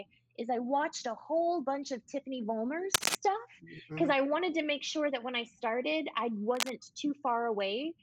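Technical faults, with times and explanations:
2.94–3.15 s and 6.53–6.70 s, cable scratch noise: brief rustling bursts, roughly 5 dB above then below the sound, likely a worn connector moved, denser and more uneven than isolated clicks.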